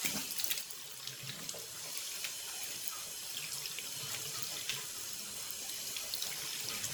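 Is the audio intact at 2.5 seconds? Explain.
No. At 2.5 seconds, as across the whole clip, there is generation loss: swirly, smeared, hollow sound with blurred attacks and nothing above 19.9 kHz, likely from around ten rounds of lossy re-encoding consistent with 128 kbit/s MP3, each pass adding fresh quantisation noise.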